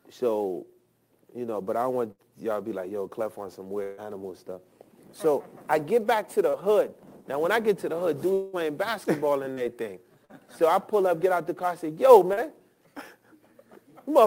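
Sample clock jitter runs through the whole clip. An unsteady converter clock of roughly 10 microseconds RMS places each sample a little early or late, and the error tracks the waveform's slope, sitting about 25 dB below the signal. It comes across as a hiss or roughness that rises with loud and high-frequency passages and disappears in the pauses. On a spectrogram this shows as a broadband noise haze that appears only under active signal, densest in the upper bands, and absent in gaps.

The first burst of packet loss falls at 2.11 to 2.22 s. The receiver bridged about 73 ms by extending the last sound and fading it, with about 80 ms of audio never played. A second burst at 3.83 to 4.01 s fills 150 ms over 160 ms missing, and a third at 10.25 to 10.32 s fills 45 ms where 40 ms went missing. Each is heard as a held buzz or fading hiss before the sound jumps ahead. A spectrogram shows a frozen, decaying patch with a hard seam on re-entry, and the waveform shows a repeating, shrinking envelope.

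Short concealed packet loss occurs at 6.50 to 6.56 s, 9.53 to 9.60 s and 12.33 to 12.40 s, each time with about 40 ms lost and roughly 36 to 38 ms synthesised from the preceding sound before blending back. These sound like a quick smear or wobble, and a brief consonant-like transient may simply vanish. Visually they are narrow blurred strips where fine detail is replaced by a smoothed continuation.

At 8.33 to 8.56 s a longer gap of about 200 ms is covered by about 197 ms of extended, fading sound, with no fully silent stretch, before the audio resumes further along. This is likely a long network dropout. It shows as a wider smeared, decaying block on the spectrogram and an abrupt resumption in the waveform.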